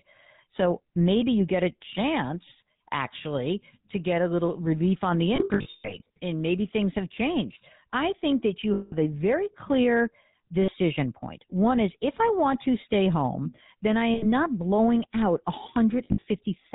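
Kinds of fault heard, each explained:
GSM full-rate codec: The whole recording passes through the early GSM full-rate codec, which fits a 13 kbps stream. It models the vocal tract and excites it with sparse regular pulses. Nothing above 4 kHz remains, and the speech carries a plainly audible buzzy, gravelly roughness.
Lost GSM frames: When frames are missing, the decoder repeats the last good frame at falling level, so the sound holds as a rough metallic ring. The worst case comes after "little relief on the", scattered from 5.36 to 6.17 s. Shorter losses follow at 8.74, 10.62, 14.14 and 16.04 s.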